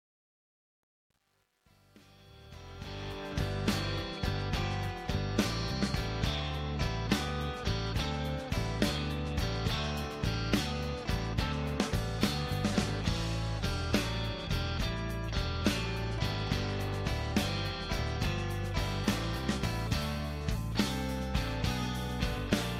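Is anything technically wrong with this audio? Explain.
Yes. From 0.00 to 3.32 s there is truncation distortion on a fade: the fade-in stage keeps only about 10 bits, with no dither. The quiet start turns into coarse square steps, so the sound is gritty, worst up to 2.78 s, before the distortion ends at 3.32 s.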